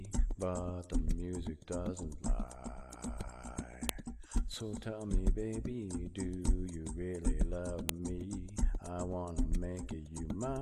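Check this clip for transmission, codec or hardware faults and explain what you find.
Two sharp, loud clicks stand out, at 3.89 s and 7.89 s, each a brief snap that cuts in regardless of what the sound is doing at that moment. This is a file header played as audio. The clip was assembled from pieces about 4 s long, joined without stripping each piece's WAV header, so those few dozen bytes of file data are decoded as samples at every seam, producing the snap exactly 4 s apart.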